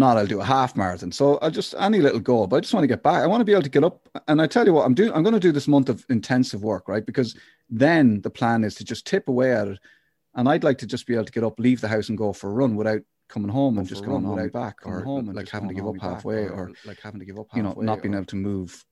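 Right after "run without coming home", at 13.78 s, a doubled audio track kicks in: a second, somewhat quieter copy of the speech trails about a second and a half behind, dry and full-band, until it cuts off abruptly at 18.2 s. Likely a slower second capture path.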